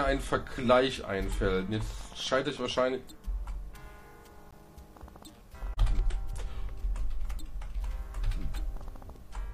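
At 4.51 s, a gap between stream segments, where mismatched timestamps leave about 18 ms unfilled, lets the player insert silence, producing a brief, hard-edged dropout.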